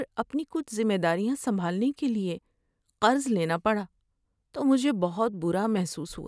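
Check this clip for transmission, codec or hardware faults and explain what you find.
No transmission, codec or hardware fault is audible anywhere in this speech recording.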